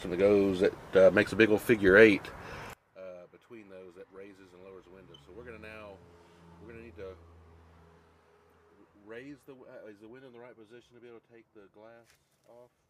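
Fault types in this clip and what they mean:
One channel inverted: from 2.73 s onward the sound drops about 26 dB, likely one side's polarity flipped, cancelling in mono.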